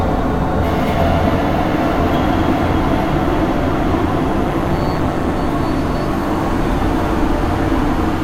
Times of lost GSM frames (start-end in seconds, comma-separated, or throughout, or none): none